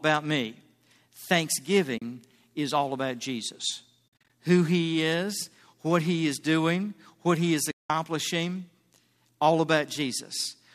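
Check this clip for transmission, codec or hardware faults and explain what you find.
Three soft gaps come from AAC frame loss with muting: 1.98 to 2.02 s (40 ms, just before "is all about"), from 4.20 s (short holes scattered over about 220 ms, the longest around 50 ms), and 7.71 to 7.90 s (190 ms). The decoder zeroes the spectrum of the lost frames, and the overlapping windows fade the sound out and back in. Each hole therefore has soft edges, unlike a hard dropout, and contains silence rather than repeated sound as concealment would produce. A light graininess underneath is likely from low-delay AAC compression.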